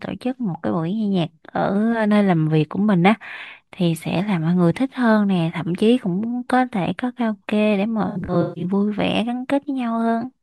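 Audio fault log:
8.09 to 8.65 s, AAC frame loss with concealment: a scatter of lost AAC frames over just over half a second, about 363 ms of audio gone in total, which points to roughly seventeen frames. The longest gap runs to around 150 ms. For each missing frame the decoder rebuilt the spectrum from the last good frame, so the speech turns smeared, noisy and phasey across this stretch rather than dropping out cleanly.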